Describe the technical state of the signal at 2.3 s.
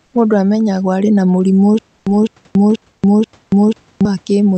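At 2.3 s the stream has likely stalled and replays its last fragment on each retry. The result is a stutter with silent gaps from 1.79 to 4.05 s, after "amenyagwo arĩ na mũrimũ": a 204 ms burst recurring every 485 ms, separated by digital silence.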